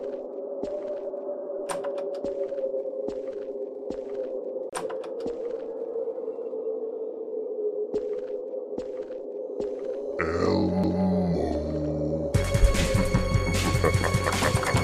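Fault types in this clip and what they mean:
CD skip, at 4.69 to 4.73 s and at 10.83 s: a jolt or disc flaw knocks the laser off its track onto another turn of the spiral, so the player mutes briefly and resumes from a different point. The first skip gives a short silence of a few tens of milliseconds before the sound picks up out of place. The second is a near-instant tick with an abrupt jump in the audio.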